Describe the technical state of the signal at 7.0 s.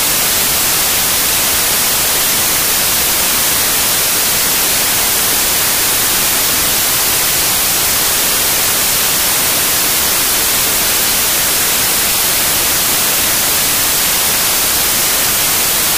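At 7.0 s the signal carries samples built from the wrong bytes, as it does throughout the clip. The reader assembles each sample's bytes in the wrong order or alignment. The rapidly changing low bits become the dominant part of every value. The result is loud, harsh broadband noise.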